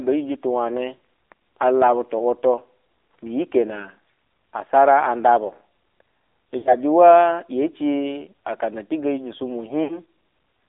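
Throughout, the speech carries the sound of the AMR narrowband mobile codec. The band is confined to roughly 300 Hz to 3.7 kHz, and the voice has the buzzy, synthetic edge of a low-rate mode, consistent with about 7.4 kbps. The codec rebuilds speech from a vocal-tract model excited by sparse pulses, so fine detail is lost. A spectrogram shows a hard ceiling near 3.7 kHz with nothing above it and smeared, blocky harmonics below.

At 0.97 to 1.00 s, 6.58 to 6.75 s and 9.84 to 9.99 s there are lost AMR speech frames. Each gap suggests three or four 20 ms frames corrupted in transmission. The decoder fills them by repeating the last good pitch and vocal-tract settings at falling gain, so the sound briefly drags, warbles and sinks toward silence before the speech returns rough. On a waveform the envelope tapers into a short trough. A spectrogram shows a frozen, fading harmonic pattern across each gap.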